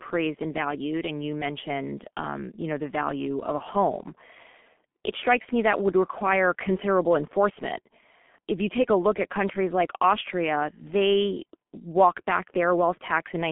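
Throughout, the speech sounds muffled and hoarse with smeared consonants: G.723.1 codec damage at about 6.3 kbit/s, passing nothing above 3.6 kHz, squeezed into a 150 Hz–3.4 kHz telephone band.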